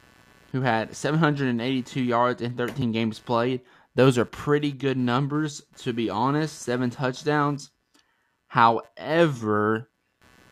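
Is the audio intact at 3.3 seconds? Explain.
No, computer activity noise runs through the whole clip, including 3.3 s: processor load shifts the shared ground, adding a faint buzzing chirp pulsing around 150 times a second, about 35 dB below the speech.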